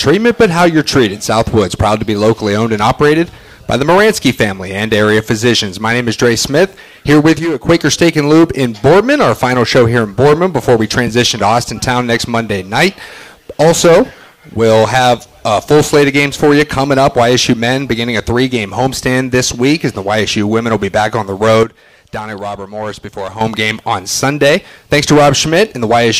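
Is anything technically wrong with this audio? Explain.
Yes, there are two sudden gain jumps. At 7.39 s the level drops by about 8 dB and stays down until 7.69 s, then at 21.63 s it falls by about 11 dB through 23.41 s. Each time the whole signal, background noise included, steps down together with no fade, then snaps back. That's likely a digital gain change applied between one sample and the next, with no ramp to smooth it.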